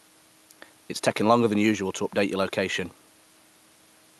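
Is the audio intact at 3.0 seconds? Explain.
Yes, the speech at 3.0 seconds is intact, with no dropout, glitch or other fault at that moment.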